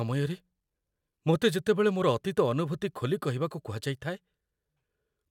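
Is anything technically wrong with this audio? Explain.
No, nothing technically wrong turns up anywhere in this speech recording, so there's nothing here to flag.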